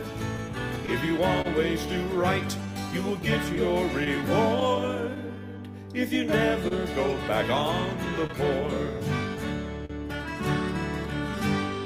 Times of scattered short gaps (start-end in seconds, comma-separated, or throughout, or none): 3.55-5.19